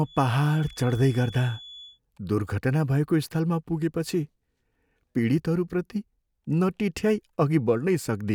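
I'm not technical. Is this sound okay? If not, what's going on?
No. From 0 to 2.0 s a faint, thin feedback whistle near 3.4 kHz sits behind the speech, wavering slightly. It is likely caused by a loudspeaker feeding a microphone, and unlike low electrical hum it is high-pitched.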